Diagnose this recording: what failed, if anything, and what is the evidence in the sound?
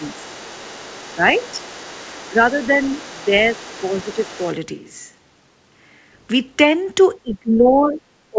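The talker's level dips in short patches at 0.0–0.23, 1.16–1.21, 1.52–1.63, 2.05–2.37, 3.13–3.33 and 3.81–4.4 s, by about 5 to 10 dB. From 7.23 s to the end it sinks by about 20 dB. This is speech suppressed in double talk, likely the echo canceller in call processing ducking near-end speech while the far end also talks.

From the start to 4.55 s a second, faint voice sits under the talker, about 25 dB down. This is the other side's voice leaking through. Its playback on the loudspeaker was likely not fully cancelled at the call-processing stage, so residual echo rides along with the microphone signal.

At 4.76 s the sound abruptly turns hollow and roomy, dropping about 10 dB, with room noise roughly 30 dB below the speech. At 6.11 s it snaps back. This is a switch to a distant microphone, likely a capture fallback from the close mic. The G.722 call path's band limit of 8 kHz is audible throughout.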